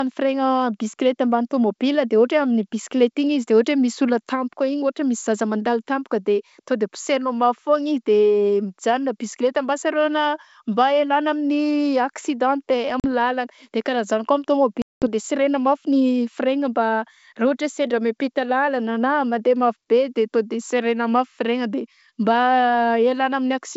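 Packet loss on an ADPCM call cuts the speech at 13.00 s for about 40 ms and again at 14.82 s for about 200 ms. Both gaps drop abruptly to silence. The decoder's predictor then resumes out of step, so the speech comes back slightly distorted before settling.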